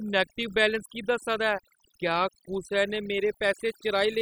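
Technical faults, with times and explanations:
Throughout: overdone noise removal. A noise reduction process has been pushed far too hard on this speech, so individual frequency bands are cut deeply or removed whenever their level sits close to the estimated noise floor. The background between phrases drops away, broken by brief twinkling specks where isolated bands flicker on and off. Quieter speech detail is removed along with the noise.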